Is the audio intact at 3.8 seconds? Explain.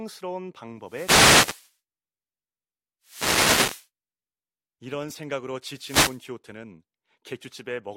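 No. At 3.8 s the speech sits inside a burst of hiss and static that runs from about 3.02 to 3.88 s, close to the end of the disturbance. This is a wireless microphone noise hit: the analogue FM radio link faded as reflected copies of the signal cancelled at the receiver, so receiver noise surged up for just under a second before the signal recovered.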